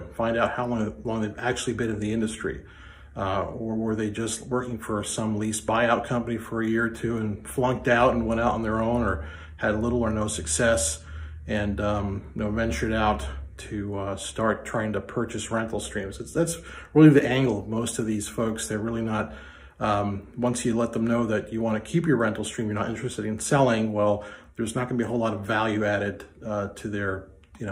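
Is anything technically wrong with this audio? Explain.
No, nothing technically wrong stood out on listening to this audio.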